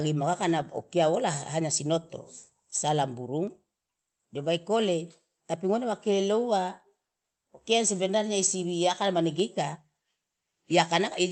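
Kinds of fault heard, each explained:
No fault of any kind can be heard in this speech clip. It has gone through a working call path, with the coding texture of a call codec and a top end that stops at 8 kHz, which fits Opus at 32 kbps.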